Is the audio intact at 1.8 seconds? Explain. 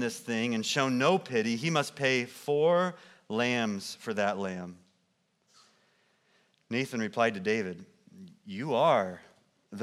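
Yes, the speech at 1.8 seconds plays through intact, with no audible dropout, click, distortion or other fault at that moment.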